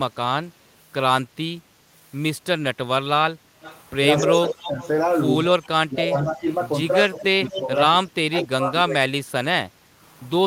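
From 3.44 to 3.6 s the room background dips by about 6 dB, then comes back. This is background gated by the echo canceller. The canceller heard its loudspeaker active and pulled the microphone gain down hard. The room tone sinks for a fraction of a second, then recovers when the canceller releases. The same dip returns from 9.7 to 9.89 s, again about 6 dB deep, lasting about a fifth of a second.

From 3.62 to 7.61 s a delayed copy of the talker trails behind the original. It arrives 217 ms late, around 10 dB below the direct speech. This is an echo leak. The likely cause is the far end playing the call over a loudspeaker while its echo canceller failed to remove all of it. The leftover returned down the line. It sounds like a slapback double of the speech.

From 4.28 to 4.79 s the talker's level drops, at worst by roughly 15 dB, over a little under half a second in total. This is speech suppressed in double talk. 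Both ends were likely talking at once, and the canceller could not tell local speech from echo. It turned everything down. A longer, deeper spell runs from 5.88 to 9.32 s. The voice sinks by up to roughly 25 dB in pieces totalling around a second and a half. It sounds ducked and chopped.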